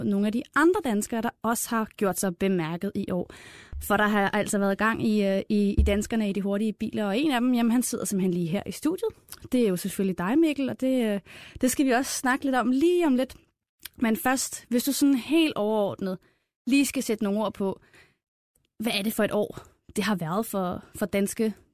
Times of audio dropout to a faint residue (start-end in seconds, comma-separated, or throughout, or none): none